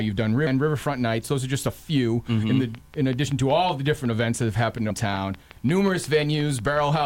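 Two brief glitches break into the audio, at 0.47 s and again at 4.91 s. They come from damaged data in a compressed stream: corrupted bytes make the decoder misread the affected frames and lose sync, producing a short glitch until it locks onto the next valid frame header.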